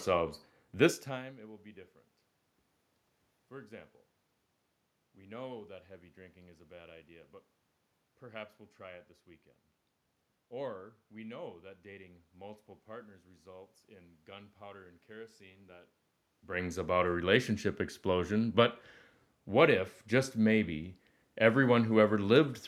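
Nothing stood out on listening to this speech recording; the background noise of the room and the talker's level shifting around 1 s and again near 16 s, as they move relative to the microphone, are part of the recording itself.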